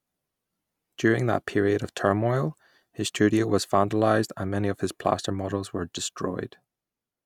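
No technical faults can be heard anywhere in the speech. Where the level moves, it rises or falls gradually, the way a fader would shift it.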